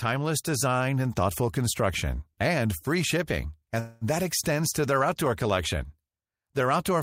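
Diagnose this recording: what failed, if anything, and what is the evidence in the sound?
Network stage: a call audio freeze from 3.79 to 4.04 s, after "construction and free shipping": the last sound is stretched into a fading buzz or hiss, likely because late packets drained the jitter buffer. "that extends to their" resumes with nothing lost, just 218 ms later.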